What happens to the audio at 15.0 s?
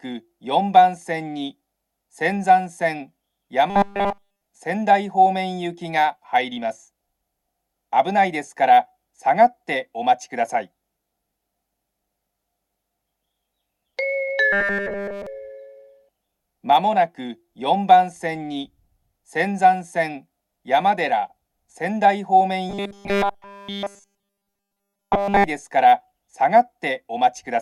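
At 15.0 s the audio is in the middle of a robotic sound from repeated short buffers, running from 14.53 to 15.27 s. The sound turns into a rigid, metallic buzz pitched at 200 Hz. Almost none of the original audio gets through. The likely cause is that new audio arrived too seldom, so the playback kept repeating its last scrap of about 5 ms. That fixed repeat rate sets the buzz's pitch.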